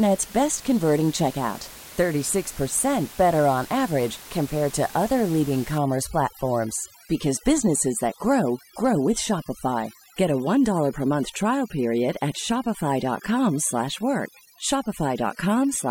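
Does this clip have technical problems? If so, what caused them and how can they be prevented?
Yes. Overdone noise removal runs from 5.78 s, right after "compared to other leading", to the end at 15.91 s. The reducer pushes every band near its noise estimate far down. The room noise, about 19 dB below the speech, drops and breaks up into twinkling specks, and quiet speech detail disappears. Lower the reduction strength and check the result by ear before exporting.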